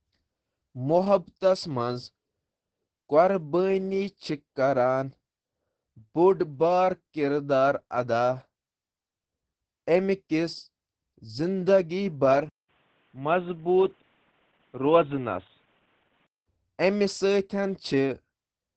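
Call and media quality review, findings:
Opus voice compression, whole clip: speech muffled, hoarse, a bit robotic, nothing above 8.7 kHz. SILK's linear-prediction coder is clearly running starved, which fits roughly 10 kbps. Wideband kept, but the excitation is coded coarsely, so the damage is heavy.

12.49 to 16.47 s: band collapses to 3.8 kHz, dull and boxy, with a faint new noise floor well below the speech and level about the same. 200 ms gap at the switch. Likely input switched to a poorer device, e.g. a headset call profile.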